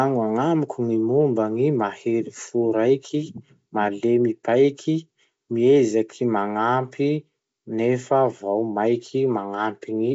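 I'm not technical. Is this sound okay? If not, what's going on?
Yes, nothing is wrong here.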